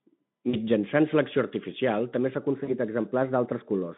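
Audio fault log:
0.49–0.56 s and 2.63–2.74 s, VoIP packet loss concealed by the speech codec: about 40 ms of packets vanish each time, likely two 20 ms frames, and the decoder extrapolates its last pitch and filter, so the speech smears into a fading buzzy tone or coloured noise, the first time just before "selecció artificial també", and stays weak briefly after.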